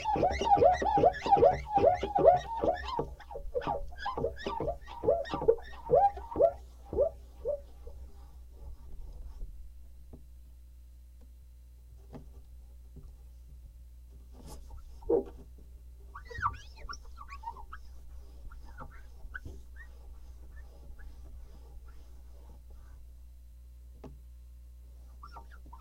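No technical faults turn up anywhere in these everyday sounds. There is nothing here that needs a time stamp or a note on how the signal was handled.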